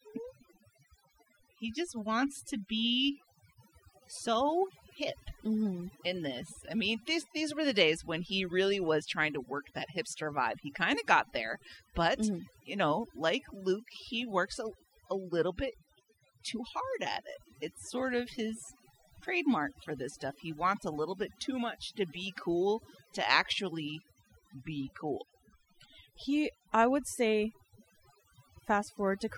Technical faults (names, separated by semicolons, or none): overdone noise removal